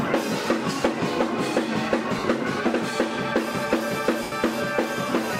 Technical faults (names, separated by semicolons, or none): lost LE Audio frames